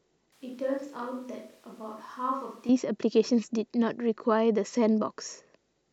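From 0.32 s to 2.69 s the speech abruptly turns hollow, roomy and thin, drops by roughly 10 dB and gains room noise, then snaps back: a switch to a distant microphone, likely after the close one failed. The sudden edges and the noise rise distinguish it from added reverb.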